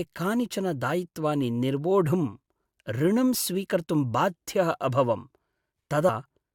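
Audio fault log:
6.08 s compressed frames skipped: near the end of the speech the audio jumps forward by roughly 70 ms, about three frames of around 21.3 ms each, because those frames never reached the output. Unlike a dropout there is no silent gap. The sound lurches ahead abruptly, and a short stretch of it is simply missing.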